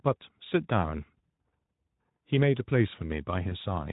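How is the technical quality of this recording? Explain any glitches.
Two brief glitches stand out against a lightly coloured Speex-coded sound at a middle-rate setting around 15 kbps. At 1.28 s and again from 3.49 to 3.55 s, the sound briefly smears into a buzzy tone or a fading coloured noise. This is VoIP packet loss concealed by the speech codec: a 20 ms frame went missing each time, and the decoder filled the gap by repeating its last pitch and filter at falling gain.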